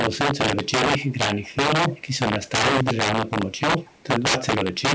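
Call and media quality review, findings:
Integer overflow, throughout: violent cracks on every loud peak, sharper than clipping. Gain stage driven roughly 15 dB too hot; a small share of samples wrap to opposite sign instead of limiting.

Echo leak: faint delayed repeat of the speech, about 230 ms behind, at 0.64–0.71, 0.98–1.15, 1.42–1.56, 1.89–2.02, 2.46–2.50, 3.26–3.30 and 3.78–4.02 s. Likely far-end loudspeaker echo the canceller didn't fully remove.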